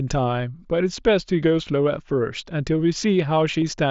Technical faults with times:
3.61 concealed Bluetooth headset packet loss

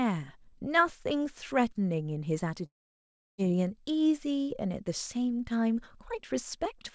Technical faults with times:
2.66-3.40 long network dropout

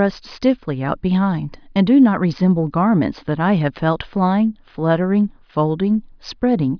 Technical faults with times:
none

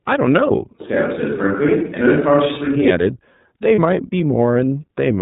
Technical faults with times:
0.00-5.21 iLBC codec
3.75-3.79 lost iLBC frames

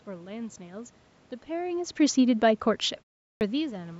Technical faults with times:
3.35-3.41 clipped start after a pause

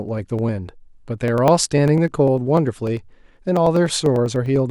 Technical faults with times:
0.09-4.66 periodic USB or driver dropouts

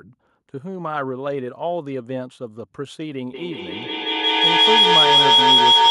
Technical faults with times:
3.34-5.91 feedback howl

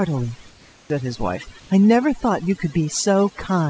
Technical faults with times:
0.00-3.69 overdone noise removal
0.50-0.90 comfort noise in place of the background
0.85-0.90 onset clipped by the voice detector
1.60-1.70 comfort noise in place of the background

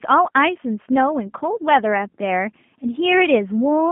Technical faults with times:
0.00-3.91 G.729 codec

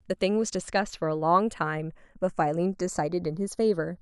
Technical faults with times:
0.00-4.02 channels drifting apart

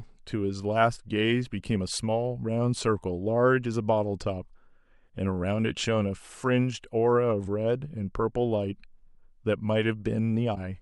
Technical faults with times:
10.54-10.57 broken MP3 bit reservoir

